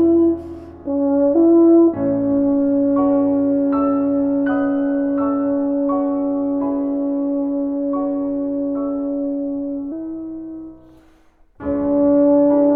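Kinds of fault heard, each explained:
Section at the wrong speed: the final stretch was likely played back against the wrong clock, running 1.15 times faster than recorded. From 9.92 s to the end, the sound turns hurried and rises by about two semitones, with tempo and pitch shifting together at once.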